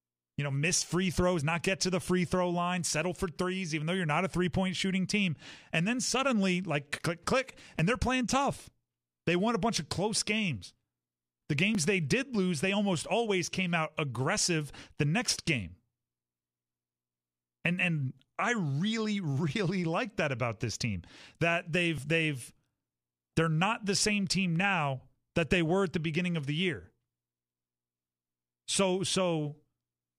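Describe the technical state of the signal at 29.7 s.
The signal is intact at 29.7 s, with no audible fault at that moment.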